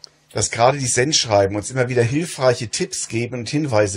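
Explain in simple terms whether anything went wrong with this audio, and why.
Nothing went wrong with this recording; the signal comes through intact, with no technical problems to report.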